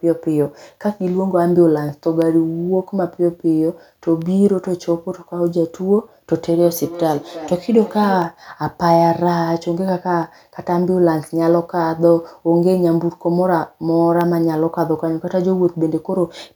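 Speech, marked by two distinct faults. From 0.21 s to 16.22 s, periodic USB or driver dropouts produce a tick roughly every 2.0 s, about ten in all. Each is a gap of a tiny fraction of a millisecond filled with silence, as a background task stalls the bus or driver. Unlike random crackle, the ticks are evenly spaced and vanish when the signal stops. Between 6.36 s and 8.39 s there is feedback echo between two devices. A second device in the room replays the call, and the first microphone captures it again, outside the reach of the echo canceller. Each phrase returns about a third of a second later, peaking at about -14 dB relative to the speech. Room reverberation would smear into a smooth tail, whereas these repeats are discrete, evenly timed and thinner each time.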